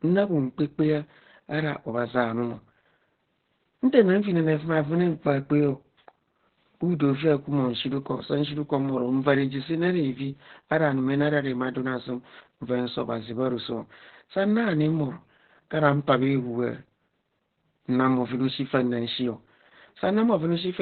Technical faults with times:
0.00-20.81 Opus voice compression

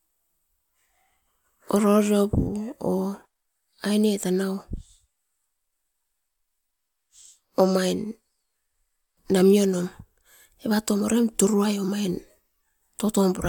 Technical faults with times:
none

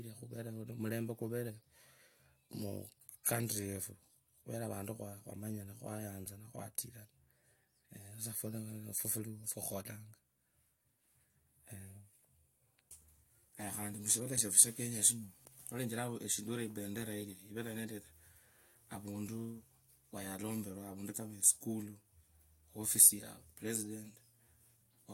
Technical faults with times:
none

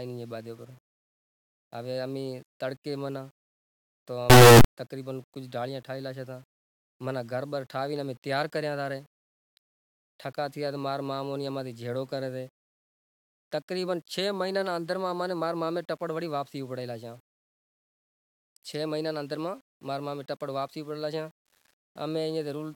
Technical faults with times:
4.30-4.64 signed and unsigned mixed up

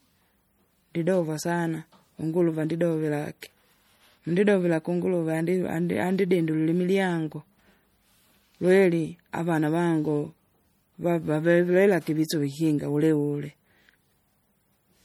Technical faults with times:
0.00-15.05 MP3 compression

